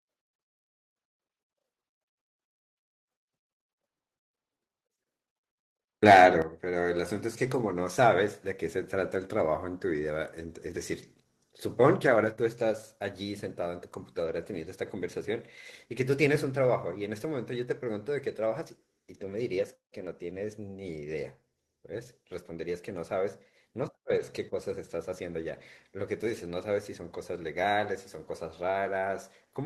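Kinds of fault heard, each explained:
Microphone volume stepped down: at 6.42 s the speech and the background behind it drop together by about 8 dB in a single sudden step. This is likely the call software cutting the microphone's input volume after judging the signal too loud.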